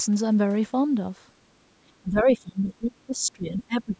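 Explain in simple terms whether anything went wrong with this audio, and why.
The echo canceller likely mistook both sides talking at once for echo, so from 1.91 to 3.96 s the speech dips sharply for about a second and a half: speech suppressed in double talk.

A bit of the other side's voice leaking through, likely missed by that same echo canceller, shows up as a very faint scrap from 2.70 to 2.74 s.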